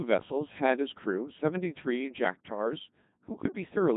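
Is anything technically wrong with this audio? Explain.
Yes. Throughout, the speech has gone through a Codec 2 vocoder, heavily damaged, in a way that fits its 2.4 kbit/s mode. Only pitch, voicing, energy and a spectral envelope survive, and the voice is rebuilt from sine waves, so it sounds robotic and buzzy. A spectrogram shows neat synthetic harmonic stacks and nothing above 3.8 kHz, and the waveform no longer matches the original shape.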